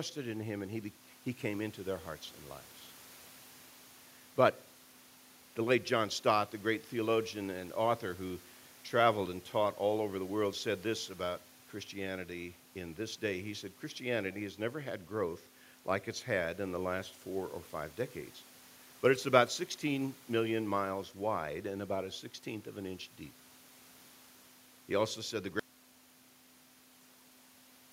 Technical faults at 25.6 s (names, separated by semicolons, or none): audio dropout to a faint residue